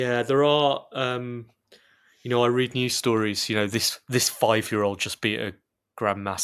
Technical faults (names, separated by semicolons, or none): none